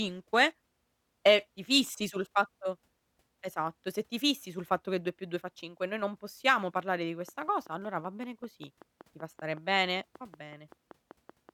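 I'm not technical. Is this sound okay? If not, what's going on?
No. From 7.29 s, right after "non possiamo parlare di", to 11.50 s there is a train of clicks: about twenty evenly spaced ticks, roughly five per second, about as loud as the speech. The likely cause is electrical interference or a faulty connection or power supply.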